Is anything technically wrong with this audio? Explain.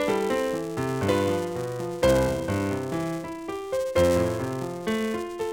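Yes. A filter restarted on every block runs throughout the clip. It starts each block from silence, leaving a small transient. This yields a 345 Hz buzz following the level, which fits a 128-sample block.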